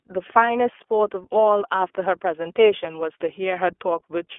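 Throughout the clip, the speech has passed through the iLBC codec on a narrowband line passing 300 Hz to 3.4 kHz, coding each short frame independently, which fits its 20 ms, 15.2 kbps mode. The result sounds muffled and thin, with plainly audible rough, synthetic grain.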